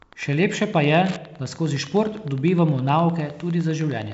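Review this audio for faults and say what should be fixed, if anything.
Wi-Fi interference runs through the whole speech recording as a steady tick repeating every 102.4 ms, roughly ten times a second, sitting around 25 dB below the speech. A nearby Wi-Fi radio's periodic beacon transmissions are being picked up and rectified by the audio circuitry, turning radio bursts into audible clicks; the ticking is present with equal regularity under the wideband telephone coding, whose content stops at about 7.7 kHz. To prevent it, move the Wi-Fi device or antenna away from the audio hardware and use shielded, properly grounded cabling.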